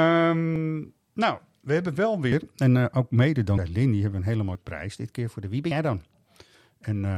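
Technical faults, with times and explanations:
0.56, 2.32, 3.58, 4.55, 5.71 and 6.55 s: likely dropped buffer (overrun). Each is a jump ahead in the speech, losing roughly 50 to 150 ms. There is no silence, unlike an underrun's gap: the missing stretch is simply spliced out, joining both sides directly.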